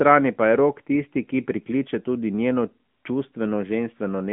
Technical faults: AMR narrowband mobile codec

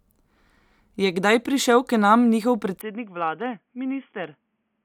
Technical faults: input switched to a poorer device

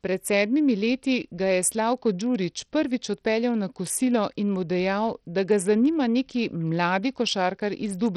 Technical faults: Bluetooth SBC compression

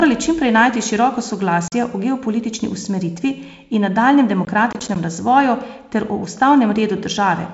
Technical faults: block of digital silence; processor overload crackle

